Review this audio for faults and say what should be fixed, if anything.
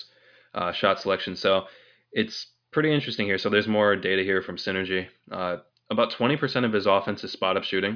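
Nothing stood out on listening to this speech recording, so there is nothing here that needs fixing.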